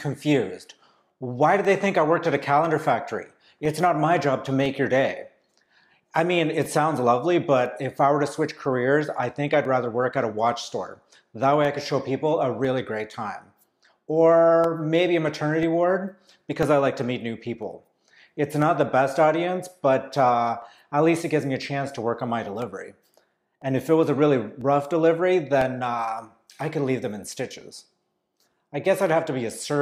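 From 0.65 s to 29.6 s, periodic USB or driver dropouts recur once per second. Something blocks the audio path at that fixed interval. Each time, roughly a millisecond of sound drops to silence. About thirty regular ticks result, audible whenever signal is present.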